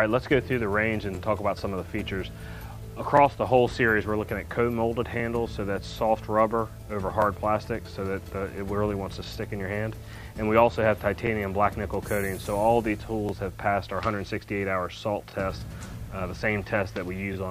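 At 1.15–1.17, 3.17–3.20, 5.20–5.22, 7.22–7.24, 11.27–11.29, 13.29–13.31 and 15.31–15.34 s, overlapping chunks cause a brief stutter-click about every 2 s. Each 2 s block begins about 23 ms before the previous one ended, so that sliver of sound plays twice. On a waveform, each join shows a repeated 23 ms segment with a discontinuity. On a spectrogram, it appears as a thin vertical broadband line.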